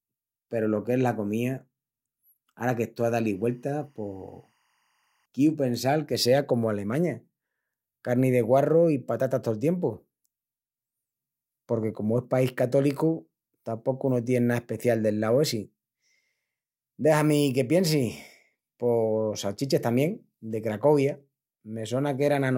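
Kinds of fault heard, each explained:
Timecode bleed: Linear timecode from a nearby track or cable leaks into this speech from 2.99 to 5.26 s. It sounds like a faint chirping warble flipping between pitches near 1 and 2 kHz, very low under the speech. Its rhythm fits 23.976 fps code.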